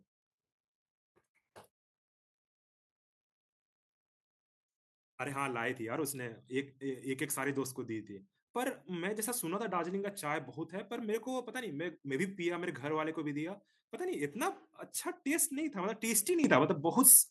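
At 16.44 s the microphone volume gets stepped up: the call software decided the mic was too quiet and bumped the input level in one go, about 10 dB. You hear the speech and the background noise jump louder together.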